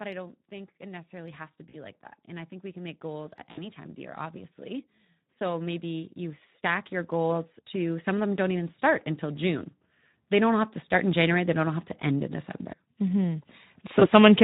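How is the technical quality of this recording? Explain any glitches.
The recording is noticeably degraded by low-rate codec artefacts throughout, plus three brief dropouts.

Speex codec, whole clip: at about 11 kbps this CELP coder has too few excitation bits, so the speech sounds plainly hoarse and noisy.

VoIP packet loss concealed by the speech codec, at 1.69–1.75 s, 3.51–3.66 s and 13.99–14.09 s: the decoder extrapolates its last pitch and filter with falling gain, so the speech smears into a fading buzz or coloured noise that stays weak briefly after recovery.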